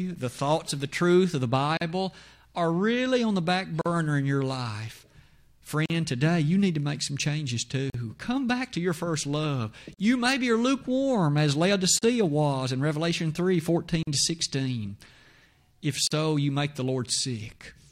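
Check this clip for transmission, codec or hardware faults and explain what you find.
There is one fault: a gap at a join of encoded pieces, repeating every 2.0 s.

Silences about 43 ms long open at 1.77, 3.81, 5.86, 7.90, 9.94, 11.99, 14.03 and 16.07 s. The first comes after "the truth of the", and the one at 11.99 s falls between "maybe are lukewarm as" and "was in". Separately encoded segments were joined untrimmed, so each encoder's start delay and last-frame padding remain. The speech drops out with smeared edges, then resumes where it stopped.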